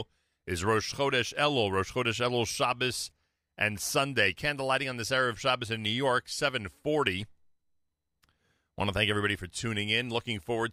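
Listening to the speech recording, nothing stood out as a technical problem at any point.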